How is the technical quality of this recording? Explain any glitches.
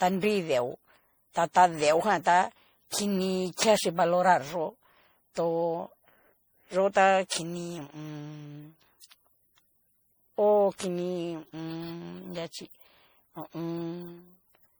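The recording is degraded throughout by generation loss: the speech sounds swirly, hollow and smeared, with blurred consonant attacks, likely from roughly seven MP3 re-encodings near 64 kbit/s. The damage exceeds what one encode at that bitrate would cause, because each pass re-quantises on a shifted frame grid and the errors stack.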